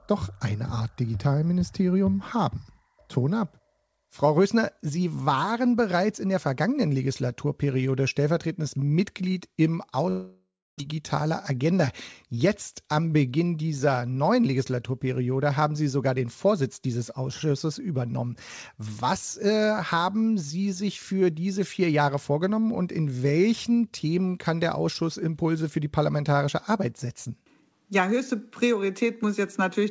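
At 10.10 s the sound gives way to a buzzy continuation of the last moment that fades, leaving about 0.29 s of near-silence before audio resumes at 10.82 s. This is most likely a long network dropout. Roughly 0.6 s of material never played, and the return skips past it. Unlike a brief packet-loss glitch, the filled stretch lasts about 0.7 s and decays into silence rather than smoothing over a gap of a few tens of milliseconds.

From 10.92 s to 11.86 s the audio runs about 6% fast at unchanged pitch, sounding slightly hurried. This is a jitter buffer speed-up. After the dropout the buffer held extra delay, and the receiver trimmed short pitch-period pieces in quick succession to shed around 70 ms. A pitch shift or resampling error would move pitch along with tempo, and this does not. The missing top above 8 kHz, consistent with a G.722 call path, runs through the whole clip.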